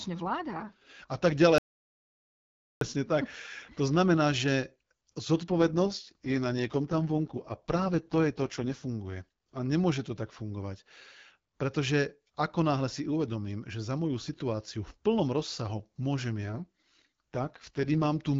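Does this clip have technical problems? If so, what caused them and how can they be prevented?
Yes. From 1.58 to 2.81 s the speech cuts off into dead digital silence, with no room tone, for about 1.2 s, and resumes mid-flow on "tak to znamená že". This is an audio dropout to silence, likely caused by the input briefly disconnecting or muting while the recorder kept writing silence, so that stretch of speech is lost. Secure cabling, stable wireless links and input monitoring with dropout alarms prevent it.

From 5.48 to 8.88 s and again from 16.49 to 18.06 s, the speech turns rougher and more synthetic without losing bandwidth or breaking up. These are AMR rate drops: a weak radio link made the network shift the AMR-WB codec from its clear 12.65 kbit/s mode down to 6.6 kbit/s, spending the bits on error protection instead. Better signal coverage, or calling over Wi-Fi or a stronger cell, keeps the codec at its higher rate.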